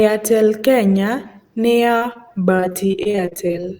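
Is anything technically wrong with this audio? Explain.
Yes. From 1.97 s to 3.66 s the speech suffers repeated packet loss (robotic sound). Eighteen short gaps follow one another, the longest about 39 ms, and each is patched by extending the previous sound, so roughly a fifth of that stretch is concealment. The result is choppy speech with pieces missing. A spectrogram shows repeated frozen, smeared harmonic blocks with abrupt edges, and the waveform shows short runs of copied cycles breaking up the natural envelope.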